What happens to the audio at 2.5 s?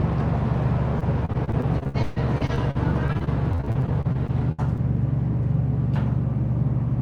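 At 2.5 s the audio is in the middle of a stretch of repeated packet loss running from 0.99 s to 4.80 s. Audio data kept arriving late or not at all, about 30 times, and each hole was papered over by extending the last received sound, the longest gap lasting 141 ms. Roughly a quarter of the stretch is this patched-in material, so around 2.5 s the sound turns choppy, with pieces dropping out.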